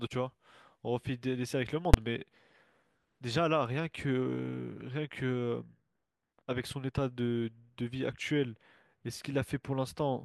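It's a speech recording, and at 1.94 s there's a single sharp bang: invalid numbers at full scale, where a processing block of about 5 ms, which fits a 256-sample block, got slammed to maximum output.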